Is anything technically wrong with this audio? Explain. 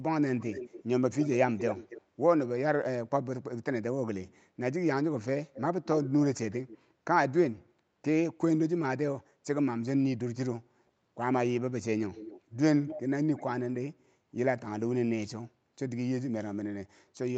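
Yes, there are two faults.

Clock slip clicks run from 0.14 s to 17.32 s. The likely cause is two devices running on separate, unsynchronised clocks that differ by around 30 parts per million. Each time the drift adds up to a whole sample, one sample is dropped or repeated. That happens roughly every 0.7 s, about 30 times across the clip, and each slip is a faint, regular tick most noticeable on sustained, louder speech.

Echo leak appears at 0.37–0.83 s, 1.19–2.02 s, 12.13–12.41 s, 12.86–13.01 s and 13.36–13.44 s. The far end was likely playing the call on a loudspeaker, and its echo canceller let part of the microphone pickup through. The first two stretches carry a copy delayed by 279 ms, the later three by 258 ms. The level ranges from about 20 dB to about 5 dB below the speech, strongest at 1.19–2.02 s, and the echo sounds like a trailing double of the voice. The top end stops at 8 kHz, as expected for this call path.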